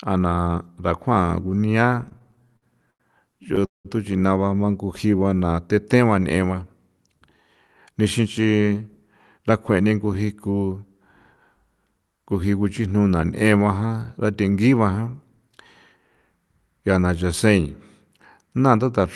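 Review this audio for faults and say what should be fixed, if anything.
From 1.95 to 3.02 s the speech breaks into repeated stalls (stutter). Packets arrived late about 13 times, and the receiver stretched the last sound to cover each wait. There's another run from 3.44 to 3.87 s, with a gap near 190 ms that fades out. A bigger jitter buffer target or a steadier network path would stop these.

From 4.85 to 5.54 s there's a jitter buffer slow-down. The speech plays at about 86% speed with the pitch unchanged, because the receiver repeated pitch periods to rebuild its reserve, adding roughly 106 ms. Smoother packet delivery would keep it from running low.

From 7.91 to 9.85 s the jitter buffer speeds up to about 109%, trimming around 200 ms to drain a backlog, so the speech sounds a bit hurried. Cutting the bursty delivery upstream would avoid the catch-up.

The Opus call path sounds like it's running around 32 kbps with a top end near 12 kHz.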